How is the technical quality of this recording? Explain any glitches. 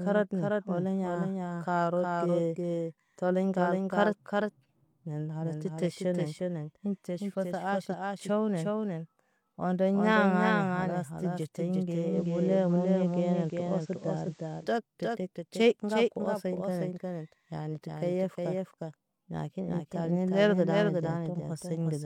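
The recording has two technical problems: a delayed second copy of the speech throughout, and a stretch where the sound falls back to an FM-quality signal.

Doubled audio track, whole clip: every part of the speech is followed by a second full-band copy roughly 0.4 s later and about 5 dB quieter. The copy has no reverberant tail or room colouring, so it reads as a clean, stuttering duplicate rather than an echo. The likely cause is the same feed being captured twice, once through a slower path, or an edit leaving two copies offset in time.

Digital radio blending to analogue, 12.07 to 14.69 s: after "kalas ti ɟete ŋge" the receiver loses the digital stream and cross-fades over about 114 ms to the station's FM broadcast, then returns to digital before "cɔt pepet". During the FM stretch a hiss floor appears roughly 35 dB below the speech, and the level shifts by about 2 dB.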